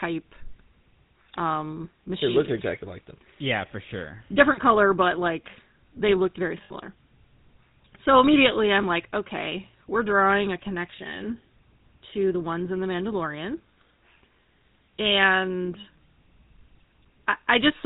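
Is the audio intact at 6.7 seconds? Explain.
No. Between 6.64 and 6.71 s there are lost GSM frames. The decoder covers the gap, which fits about three 20 ms frames, by repeating the last good frame's settings, so you get a short, rough metallic ring.

The GSM full-rate codec also runs through this moment at 13 kbps. It rebuilds the sound from a vocal-tract model driven by sparse pulses and drops everything above 4 kHz, so there's a clear buzzy, gravelly edge.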